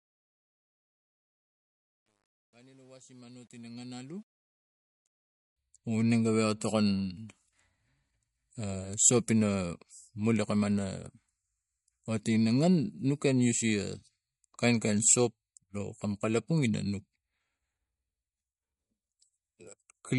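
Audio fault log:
Throughout: MP3 compression, likely the cause of the dull, watery quality. Nothing reaches above 11.2 kHz, and weak detail flickers in and out between frames, which fits a low bitrate near 48 kbps. This is a steady, full-length smear rather than grit tied to level.
0.0–5.56 s: truncation distortion on a fade. The fade-in's quiet start turns gritty, worst up to 4.2 s, which fits a stage keeping about 10 bits without dither. The grit fades as the level rises, unlike codec swirl.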